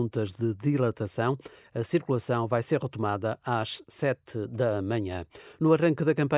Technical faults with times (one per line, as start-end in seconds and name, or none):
none